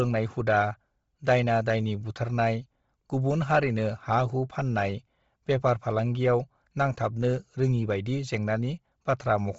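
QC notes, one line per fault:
Throughout: Bluetooth LC3 compression, likely the cause of this heavy codec damage. The speech has nothing above about 7.7 kHz, and the top of the remaining band sounds breathy and grainy. At this rate the encoder drops much of the upper spectrum and fills the gaps with shaped noise rather than real detail. The density of the damage fits a low setting near 24 kbps, with short frames around 7.5 ms.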